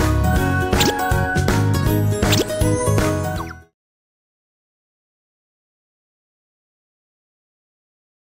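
Nothing here counts as a fault; the level just eases away in a smooth fade out that begins around 3 s and finishes at 3.75 s, the kind of gentle edit an engineer would make, with no click or hard edge.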